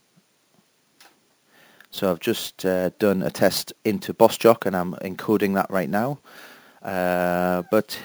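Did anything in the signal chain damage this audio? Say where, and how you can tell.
Yes. Imaging from sample-and-hold upsampling damaged it at the sample-rate conversion stage, throughout. Audio at 16 kHz was raised to 44.1 kHz by repeating samples with no smoothing filter, leaving a metallic fizz about 21 dB down. A spectrogram shows a mirrored copy between 8 and 16 kHz, and the waveform looks staircased.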